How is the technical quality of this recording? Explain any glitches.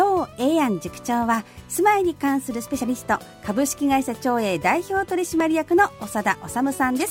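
The recording has two brief glitches, at 2.68 s and 5.40 s, each an abrupt jump where the sound skips forward slightly with no gap. These are likely dropped buffers (overrun): the capture software fell behind, the hardware overwrote a block of samples, and the audio on either side was spliced together with only a few milliseconds missing. What sets this apart from an underrun is that nothing is inserted. There is no silent hole, only a discontinuity heard as a jump in the sound.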